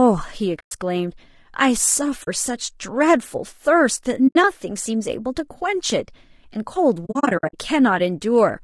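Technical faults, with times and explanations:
Throughout: low-delay AAC compression. The speech sounds rough and grainy, with noise filling the gaps between harmonics and an artificial-sounding top band. The likely cause is AAC-ELD coding at around 32 kbps. Its short frames resolve pitch harmonics poorly and leave too few bits.
0.59–0.72 s, 2.23–2.28 s, 4.27–4.36 s and 7.05–7.55 s: AAC frame loss with muting. Whole frames of audio vanish, leaving soft-edged silences of 120, 40 and 80 ms. The last stretch holds scattered gaps, the longest about 70 ms. Overlapping windows fade each edge.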